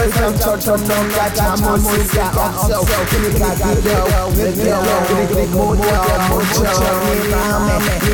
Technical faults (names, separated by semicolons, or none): doubled audio track